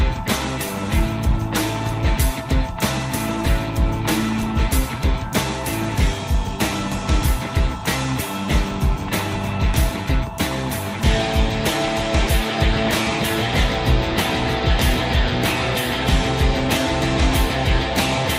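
No technical faults can be heard anywhere in the audio.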